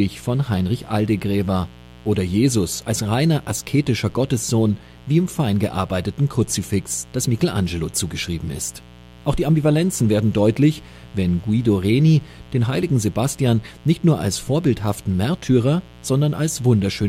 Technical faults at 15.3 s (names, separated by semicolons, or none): mains buzz